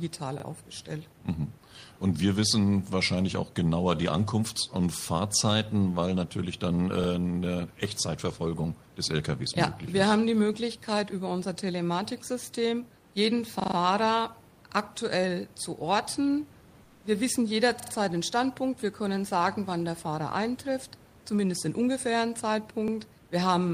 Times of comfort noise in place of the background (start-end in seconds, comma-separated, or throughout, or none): 16.87-16.99